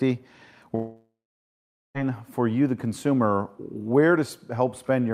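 At 0.75 s the sound decays into a fading buzz, then 0.83 s of silence; it returns at 1.97 s with 1.2 s lost, likely a long network dropout.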